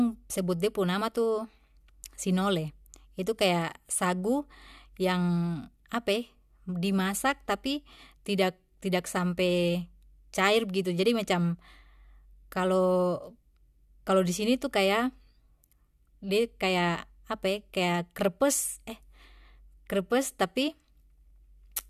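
Nothing here calls for comment, since the recording runs its whole course without a single technical fault turning up anywhere in it.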